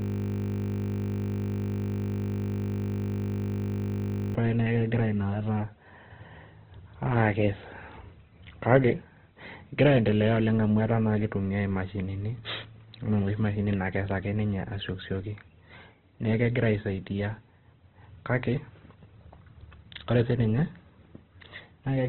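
From the very start until 4.35 s, a system hang loop is already under way: one 20 ms slice of audio repeats exactly, over two hundred times, giving a steady 50 Hz buzz. The waveform shows an identical short cycle tiled end to end, and the spectrogram shows evenly spaced 50 Hz harmonic lines.

Across the whole clip, the speech is rough, noisy and grainy, with nothing above about 4.2 kHz. This heavy narrowband damage likely comes from Opus compression at a very low bitrate, around 12 kbps. On a spectrogram the energy stops at a flat ceiling near 4.2 kHz, with smeared, noise-filled bands below it.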